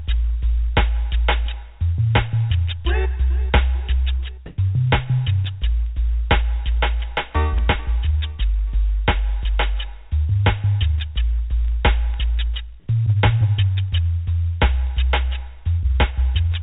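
Comfort noise in place of the background, from 4.46 to 4.58 s: for about 120 ms the quiet background, sitting about 28 dB below the loudest passages, gives way to a flat, featureless hiss whose level differs by roughly 16 dB. The likely cause is discontinuous transmission: the sender stopped sending during the lull, and the receiver filled the gap with synthetic noise. Like the rest of the sound, the patch carries nothing above 4 kHz, which fits a narrowband telephone codec.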